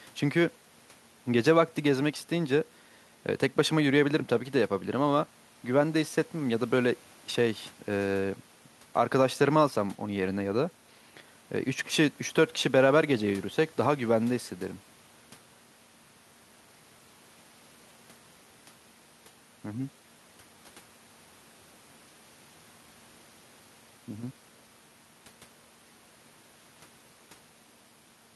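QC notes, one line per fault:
Nothing to flag here; I didn't hear anything wrong anywhere in this speech recording.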